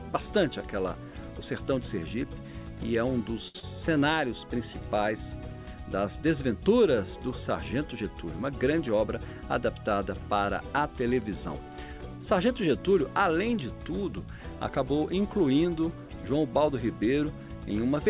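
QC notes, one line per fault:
3.48–3.56 s, short stall from a late packet: a packet arrived late, so the receiver stretched the last sound for about 66 ms, then resumed where it left off. Nothing is lost, but one sound is held too long with a faint buzz. On a spectrogram the harmonics run as frozen horizontal stripes below the 4 kHz ceiling, and the waveform shows the same cycle repeating.
3.60–3.64 s, short concealed packet loss: about 60 ms of audio never reached the decoder, and the receiver covered it with about 30 ms of continued sound before blending back. It is heard as a brief smear or wobble with a small skip forward. A spectrogram shows blurred, smoothed energy at the joins. The waveform loses its detail there, and the event is shortened.
8.93–9.34 s, jitter buffer speed-up: the buffer held too much audio, so short pitch-period pieces were cut out repeatedly. This removes roughly 50 ms and plays this stretch at 111% speed with unchanged pitch, so it sounds hurried. 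Spectrogram features look compressed in time while their frequencies stay put. The waveform shows spliced cycles.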